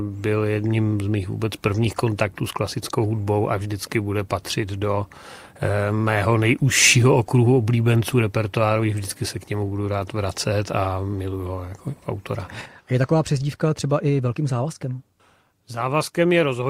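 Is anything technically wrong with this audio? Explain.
No, nothing in this audio points to a technical problem with the signal or the way it was captured or transmitted.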